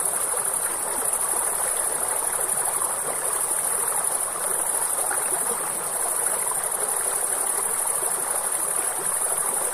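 No technical faults can be heard anywhere in this clip. There is nothing to point to at any moment in the audio.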